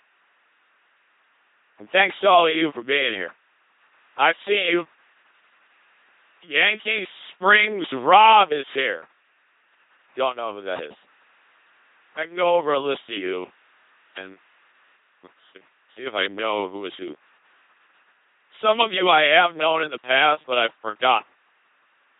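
Throughout the speech, a faint mains buzz sits well below the voice: spiky 50 Hz interference whose harmonics stack as evenly spaced horizontal lines up the spectrogram. The whole clip also passes through an LPC-10 vocoder, heavily damaged, consistent with a roughly 2.4 kbit/s channel. Each frame becomes a pulse-driven or noise-driven buzz, giving robotic speech with stray hiss and nothing above 3.8 kHz.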